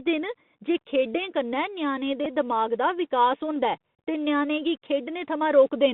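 The whole clip runs through a Bluetooth CVSD headset codec. The speech is boxed into roughly 150 Hz to 3.7 kHz, with scratchy s sounds and a grainy hiss, which fits a 64 kbps CVSD link. Bluetooth headset packets get repeated twice: a brief glitch at 2.25 s, then a 34 ms stretch from 3.95 to 3.99 s where the repeated packet data makes a short buzz near 267 Hz.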